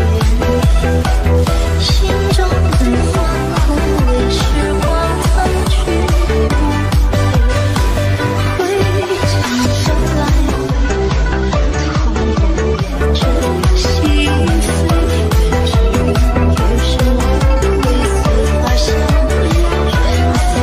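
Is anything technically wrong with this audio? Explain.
Yes. From 10.51 to 13.03 s there is digital radio blending to analogue. The receiver cross-fades over about 0.3 s to FM. Faint hiss appears, and the level drops about 1 dB.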